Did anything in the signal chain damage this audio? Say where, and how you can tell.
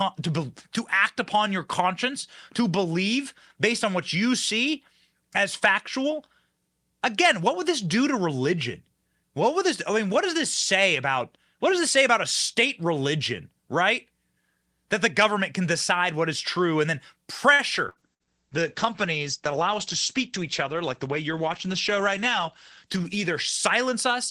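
Yes. The damage sits in the network and call-processing stages, all after 17.5 s.

A short stall from a late packet comes first, from 17.53 to 17.62 s, right after "is true and then". One sound is held too long, with a slight buzz or dip. The jitter buffer ran dry and the receiver stretched the last sound for 56 ms. Playback then resumed where it left off. Nothing is lost, but the delay grew by 56 ms.

Burst packet loss follows twice, at 17.89 to 17.99 s and 18.14 to 18.23 s. Each gap holds a fading buzz or hiss, then the speech jumps ahead. Several packets in a row never arrived in time. The receiver extended the last sound and turned it down. About 60 ms of speech is gone each time.

A call bitrate drop starts at 17.99 s and runs to the end. The speech turns rough and muffled. Bandwidth estimation fell, so the Opus encoder went from 48 to 12 kbps. It stayed at its lowest for about 4.8 s. 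The coarser coding adds the roughness. The top end is cut from 20 kHz to 8 kHz, which explains the dullness.

A jitter buffer speed-up runs from 20.32 to 21.39 s. The speech runs a little faster, but the pitch stays put. Too much audio had piled up in the buffer. The receiver trimmed pitch-period pieces, about 50 ms in all, to run at 104% speed. That shrank the backlog without changing the pitch.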